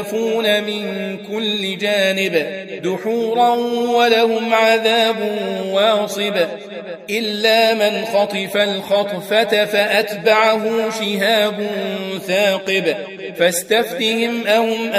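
Nothing in the audio stood out as a technical problem on listening.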